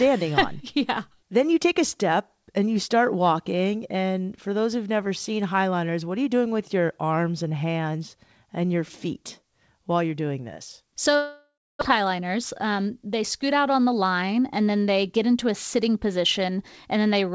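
Just after "while you're doing this", at 11.16 s, the speech breaks off until 11.83 s. The last sound is stretched into a fading buzz, then about 0.29 s of near silence follows. This is most likely a long network dropout: packets stopped arriving, and the receiver filled the gap by extending what it had. Around 0.6 s of speech is lost for good. Speech resumes slightly shifted in timing, still band-limited to 8 kHz by the call codec.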